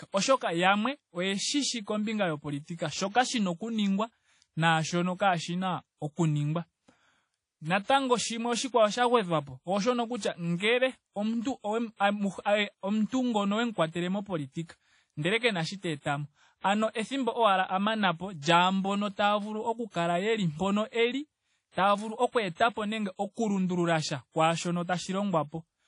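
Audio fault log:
Throughout, WMA compression: Plainly audible ringing and washy hiss that breathes with the speech, with nothing above 10.1 kHz. This likely comes from low-bitrate transform coding near 32 kbps.
21.71 to 21.77 s, pre-echo: Just after "kala yeli mpono eli", a hiss runs 52 ms ahead of an attack. The coding noise, spread across the block, fills the quiet moment before it.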